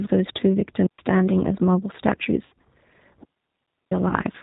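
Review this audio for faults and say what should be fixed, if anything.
The whole clip has a narrow, slightly rough and synthetic quality, with nothing above 4 kHz. That is G.729 codec damage at 8 kbit/s. The codec rebuilds speech from a vocal tract filter, a pitch predictor and a few pulses per sub-frame, so fine detail and high-frequency content are lost.

From 2.46 to 2.52 s and again from 4.08 to 4.14 s, the speech briefly smears into a buzzy, fading tone and stays weak just afterward. This is VoIP packet loss concealed by the speech codec. The decoder extended its last pitch and filter over about 60 ms of missing audio (likely two packets) and then about 30 ms (likely one), and recovery lagged because each frame depends on the one before.

From 3.23 to 3.91 s there is a clean hole of near silence, about 0.68 s long, with no noise burst on either side. That is a digital wireless dropout: the receiver muted with a very short fade when the link lost too much data.

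To prevent these, use a wider-band codec at a higher bitrate with jitter buffering and forward error correction, and keep the wireless transmitter within reliable range of its receiver, clear of interference.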